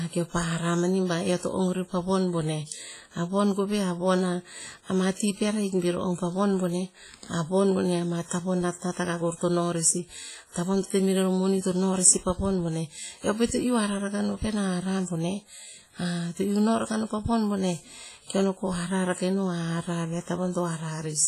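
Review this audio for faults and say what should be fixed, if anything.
WMA compression, throughout the speech: heavy damage, with ringing, a washy smear and hiss that breathes with the signal, and nothing above 15.4 kHz. This fits a bitrate near 24 kbps, likely from long transform blocks that spread quantisation noise over tens of milliseconds and zero weak spectral lines. Prevent it by keeping a lossless master and encoding at a higher bitrate.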